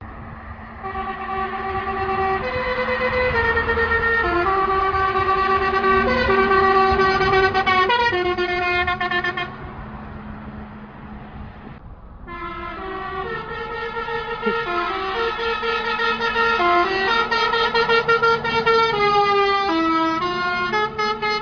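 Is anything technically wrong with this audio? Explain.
No, nothing technically wrong can be heard here. Nothing in the sound points to a problem at any stage of recording, processing or playback.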